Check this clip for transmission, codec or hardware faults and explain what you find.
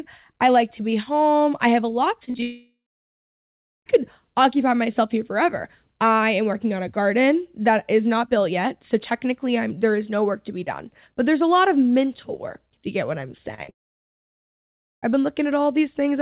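Two network faults show up, each twice, on a call-style path with nothing above 4 kHz, which fits G.711 mu-law at 64 kbps.

Repeated packet loss (robotic sound) hits at 2.2 to 2.43 s (five gaps, longest 36 ms) and 13.55 to 13.69 s (four gaps). Each lost packet gets patched by stretching the last bit of sound, so it turns choppy.

Long network dropouts follow straight after, from 2.43 to 3.87 s and 13.7 to 15.08 s. The concealed tail fades out, then you get 1.1 to 1.3 s of silence before the audio resumes with that chunk gone, likely because nothing arrived over the network.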